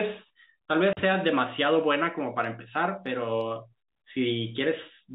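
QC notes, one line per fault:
0.93–0.97 s, packet loss filled with silence: a 40 ms gap with hard edges, where missing audio was replaced by silence. The length fits four lost 10 ms packets.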